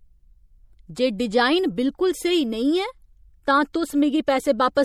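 Throughout the speech, the audio has a watery, swirling quality, with chirpy s sounds and smeared consonant onsets, consistent with MP3 compression and likely a low bitrate around 64 kbps. A spectrogram would show speckled high-frequency patches flickering on and off.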